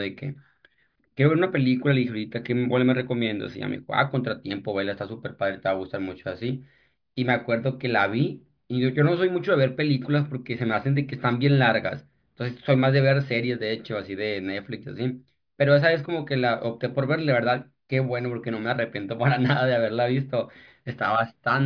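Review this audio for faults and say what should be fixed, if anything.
Nothing to fix: no faults turn up anywhere in the speech.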